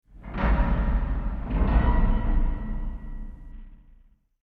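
At 3.52 s a Bluetooth SBC bit pool drop sets in and lasts to the end. The sending side cut the encoder's bit budget sharply to keep the link alive, which fits a fall from a bit pool near 28 to about 5, or roughly 54 kbps. With so few bits, the upper sub-bands get starved and the rest are coarsely quantised. The top end goes dull and muffled, and a gritty, grainy noise rides over the audio.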